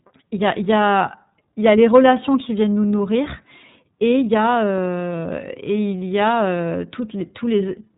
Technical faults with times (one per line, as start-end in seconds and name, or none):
0.00-7.98 iLBC codec